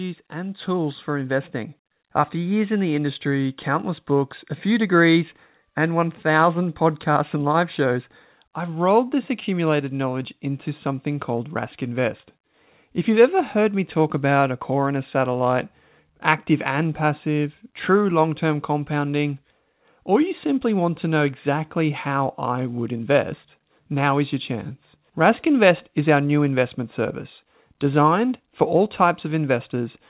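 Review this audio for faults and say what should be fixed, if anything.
Automatic gain rising, 0.31 to 4.11 s: the gain control ramps up about 7 dB on quiet input, swelling voice and background together into a steadily widening waveform envelope. Setting a correct input level before the call, or slowing and capping the gain control's adaptation, would prevent it.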